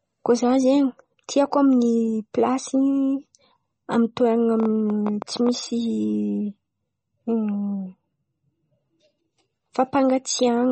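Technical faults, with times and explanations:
Throughout: MP3 compression, likely at a low bitrate near 32 kbps; nothing above 8.3 kHz, watery swirling treble, unlike steady filtering because weak components flicker frame to frame.
4.60 to 5.50 s: train of clicks, about ten sharp similar pulses at uneven spacing, roughly 10 per second, standing about 10 dB above the speech, unlike codec smearing.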